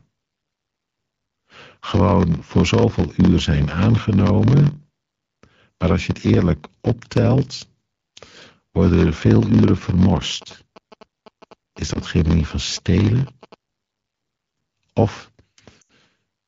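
Throughout the speech runs with a block size mismatch (padded). One stage writes shorter blocks than the next reads, and each block's remainder is zero-filled. The resulting gap repeats at 43.1 Hz, heard as a steady buzz. Playback is slowed to 0.938 times normal speed, which fits 1024-sample reads fed by blocks of about 960 samples.

From 10.42 to 13.54 s, GSM signalling bursts appear. A nearby 2G phone transmitting short groups of radio bursts is rectified by the audio circuit, producing a galloping dit-dit-dit of 217 Hz buzzes about 25 dB below the speech.

At 11.93 s one AMR frame is lost, 20 ms long. The decoder conceals it by repeating the last good pitch and vocal tract parameters at falling gain, so the gap is heard as a brief dip or warble.

From 15.81 to 15.91 s four consecutive lost AMR speech frames, 80 ms in total, are concealed the same way. Because the stream is wideband, the sound drops to near silence within two frames, and the speech returns weak or rough for a moment. 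The AMR-WB codec itself runs at 12.65 kbit/s with light coding damage.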